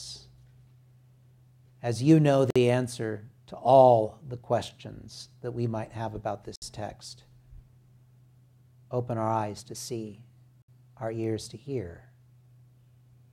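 Separately encoded pieces were joined without trimming their start delay and end padding, leaving gaps at a join of encoded pieces every 4 s: 2.50 s (52 ms), 6.56 s and 10.62 s (64 ms each).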